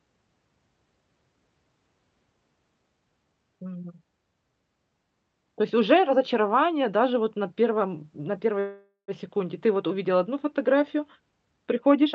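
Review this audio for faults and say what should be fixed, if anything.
At 8.59 s the speech stalls in a call audio freeze lasting until 9.11 s. The sound holds as a fading buzz or hiss that ends in about 110 ms of silence, most likely because packets were delayed and the jitter buffer ran dry while the receiver stretched the last audio. Unlike packet loss, where a chunk vanishes and speech jumps ahead, nothing is missing here. The speech picks up exactly where it paused, so everything after it arrives about 487 ms late. The Opus call path limits the audio to an 8 kHz bandwidth throughout. To prevent the freeze, stabilise the network route and allow the jitter buffer enough headroom to absorb delay spikes of around half a second.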